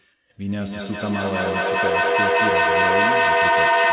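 From 0.43 s to the end of the clip there is feedback echo between two devices: a second device in the room plays back what the first microphone sent, and that microphone picks it up again. The echo canceller removes only its own device's playback, so the loop stays open. Each stretch of speech returns roughly every fifth of a second, thinner and more ringing. The loop is loud enough that the repeats pile up, peaking at about 9 dB above the speech, all within the narrow 4 kHz band of a G.711 call.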